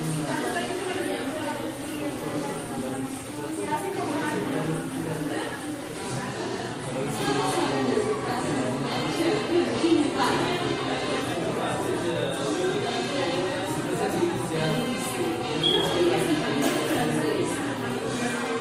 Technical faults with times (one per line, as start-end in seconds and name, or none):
none